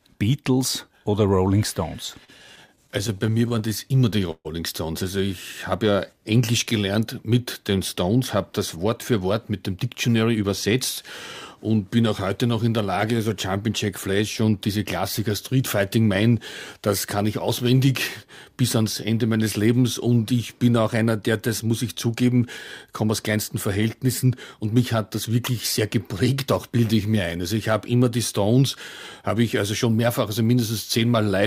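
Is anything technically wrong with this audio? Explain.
Yes. From 2.05 to 4.47 s the sound drags and stutters through 21 brief stalls, the longest 138 ms. This is repeated stalls (stutter): late packets emptied the jitter buffer, and the last sound was stretched to cover 354 ms with nothing lost.

From 5.91 to 6.20 s the audio slows to 88% speed at unchanged pitch. This is jitter buffer slow-down: repeated pitch periods added 44 ms to rebuild a reserve.

The audio hurries at unchanged pitch from 8.76 to 10.44 s (109% speed), 23.04 to 23.56 s (105%), and 29.28 to 29.73 s (107%). This is jitter buffer speed-up: removing pitch periods cut an overfull buffer by about 150 ms, then about 40 ms twice.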